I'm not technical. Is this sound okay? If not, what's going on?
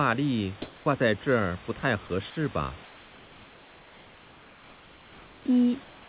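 No. In the pauses, the call most likely stopped sending sound, and the receiving end filled the gap with comfort noise in place of the background. From 0.62 to 0.86 s, 2.84 to 5.45 s and 5.84 s to the end, the real room hiss becomes a smooth, featureless hush. It is slightly louder in the first gap and slightly quieter in the others.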